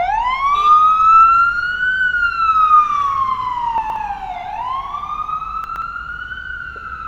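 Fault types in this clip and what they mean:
Chunks out of order: a 60 ms block of audio reached the output two blocks late and played after the blocks meant to follow it. At 3.78 to 3.96 s and again at 5.64 to 5.82 s the sound briefly jumbles, with three hard joins.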